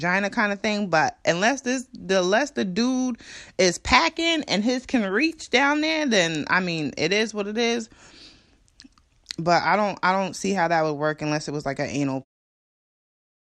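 Nothing is technically wrong with this speech clip, which ends with a smooth fade-out from about 12 s to 12.25 s.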